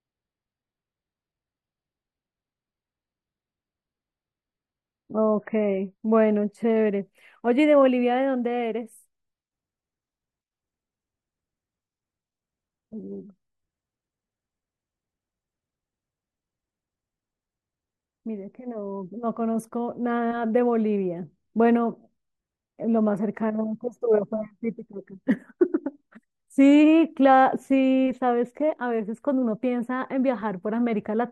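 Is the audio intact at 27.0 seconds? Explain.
Yes, at 27.0 seconds the speech is intact, with no audible fault at that moment.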